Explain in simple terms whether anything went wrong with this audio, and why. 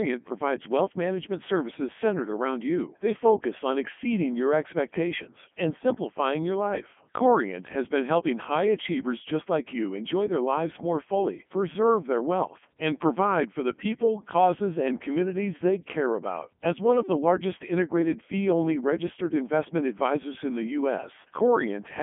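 Throughout the whole clip, the speech sounds robotic, buzzy and muffled. That's the Codec 2 vocoder, which rebuilds the voice from a few simple measurements instead of keeping the original sound.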